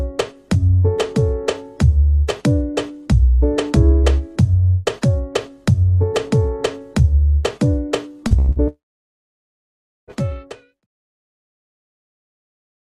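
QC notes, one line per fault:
8.27–8.34 s and 8.51–8.59 s, short concealed packet loss: about 40 ms lost each time, patched by extending the preceding sound; shows as smeared, harmonic-blurred slivers on the spectrogram.
8.39–8.50 s, burst of packet loss: roughly 80 ms gone, filled with a held, decaying continuation; waveform shows a smooth tapering envelope, spectrogram a frozen, fading band.
8.68–10.13 s, long network dropout: about 1.4 s missing, likely a network outage; brief fading fill then near-flat waveform and empty spectrogram for about 1.3 s before audio resumes.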